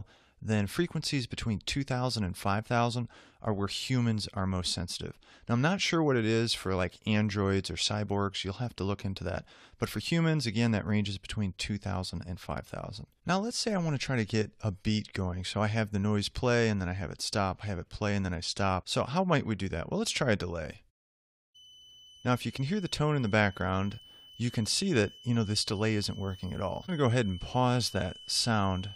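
No technical faults can be heard anywhere in the audio, and the signal holds steady and continuous throughout.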